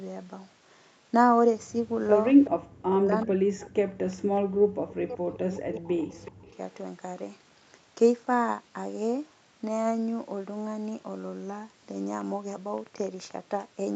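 Right at 2.44 s there's a short echo leak: a faint, delayed copy of the far talker comes back about 375 ms late, roughly 15 dB under the speech. That's most likely the far end's loudspeaker getting into its microphone, with the echo canceller not catching all of it. More scraps follow at 4.12 s, 6.12 to 6.29 s and 6.48 s. These are quieter, about 30, 25 and 30 dB down.

Straight after the first leak, from 2.51 to 2.58 s, you get the background gated by the echo canceller. The room tone just drops out for about 70 ms, falling by about 39 dB at its deepest, because the canceller clamped the mic hard while the loudspeaker was playing. Then it lets go and the ambience pops back in.

Then there's speech suppressed in double talk, from 2.86 to 3.88 s, 4.39 to 6.11 s and briefly at 6.28 to 6.47 s. Here the talker's voice dips by as much as 40 dB or breaks up into pieces. Likely both sides were talking at once, and the canceller couldn't tell the local voice from the echo, so it turned everything down. 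The longest stretch runs about one and a half seconds. The top end of the voice stops around 8 kHz throughout, which is just the call's bandwidth.

Near the end, from 12.21 to 13.32 s, there's a train of clicks: about ten sharp ticks at roughly 10 per second, unevenly spaced, with peaks about as loud as the speech itself. They sit on top of everything, pauses included. They're likely interference from nearby equipment or a faulty connection or power supply.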